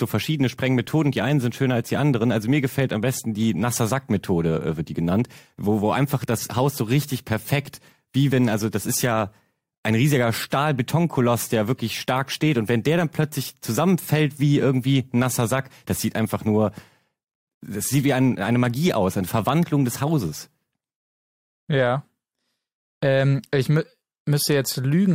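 No technical faults can be heard anywhere in the recording.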